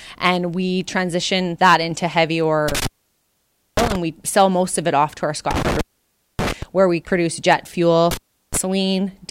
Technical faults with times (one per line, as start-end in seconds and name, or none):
2.68-3.96 intermittent contact
5.51-6.63 intermittent contact
8.11-8.57 intermittent contact